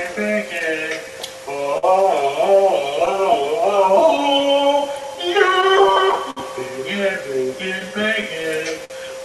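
The audio has a faintly unsteady tempo from start to finish, with slight hiccups at uneven intervals. This is clock drift between sender and receiver: the sending clock runs around 5 percent slow, so the receiver's jitter buffer keeps draining and must be topped up. Those repeated timing corrections run from 0.14 to 8.81 s. The receiver repeats short pieces to keep in step, playing at 98% speed and stretching the passage by roughly 150 ms in total, all in the same direction. Two bursts of scattered short gaps add brief ticks and smears. The first comes between 0.16 and 1.85 s, with about seven holes, the longest around 50 ms. The second comes between 5.03 and 6.39 s, with about seven holes, the longest around 70 ms. In each case late or lost packets were patched by extending the preceding sound, so nothing is actually missing. Near the end, from 7.79 to 8.92 s, the sound drags and stutters in repeated stalls. 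The buffer ran dry five times, covering 92 ms in all, with the longest wait 54 ms, and each time the last sound was held until playback could continue. Underneath, the call path's Opus coding at a bitrate of about 48 kbps leaves its usual coding noise and a top end that stops near 12 kHz.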